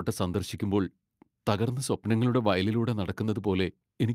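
A short speech recording with nothing technically wrong to point to anywhere in it.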